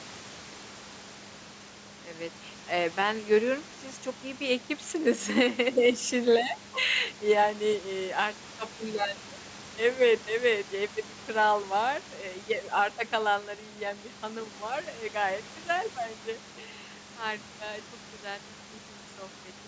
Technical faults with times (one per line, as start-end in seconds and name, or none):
none